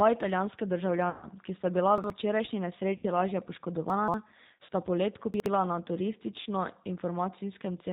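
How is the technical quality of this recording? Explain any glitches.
Technical quality is poor: the speech is intelligible throughout but carries constant codec coloration, and it is interrupted by seven brief dropouts and scrambles.

Across the whole clip the speech sounds narrow, slightly rough and synthetic, with nothing audible above 4 kHz. That fits the G.729 codec at 8 kbit/s. This codec does not send the waveform itself. It rebuilds each 10 ms frame from a vocal-tract filter, a pitch predictor and a handful of pulses, and that sparse reconstruction leaves a plainly audible rough, artificial edge.

At 1.10–1.29 s, 2.97–3.05 s, 4.66–4.69 s and 6.40–6.49 s the sound smears into a fading buzzy tone or coloured noise before it recovers. This is VoIP packet loss concealed by the speech codec. The gaps cover about 120 ms, 60 ms, 30 ms and 60 ms, which fits 30 ms packets going missing. 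The decoder filled each gap by extending its last pitch and filter while lowering the gain, so the sound stays weak or distorted briefly after packets resume.

At 1.98–2.10 s, 3.90–4.14 s and 5.34–5.46 s there are jumbled moments where the sound seems to stutter out of sequence. These are chunks out of order. A 60 ms piece arrived late and played after material that should follow it, displaced by one chunk, three chunks and one chunk respectively. No audio is lost, but the hard joins at the misplaced boundaries produce the garbled effect.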